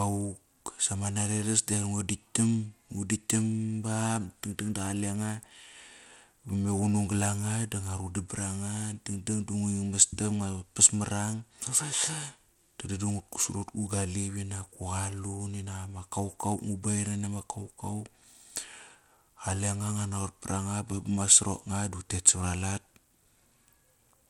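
Likely Bluetooth SBC compression starves upper sub-bands of bits, fitting a 96 kbps stream: nothing above 16.9 kHz, gritty noise throughout the speech.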